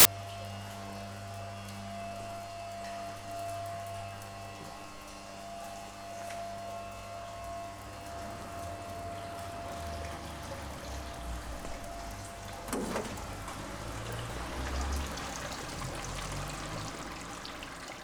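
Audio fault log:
0.00–0.05 s, file tags played as audio: a hard-edged burst of very loud white noise, from an embedded cover picture's compressed data read as samples.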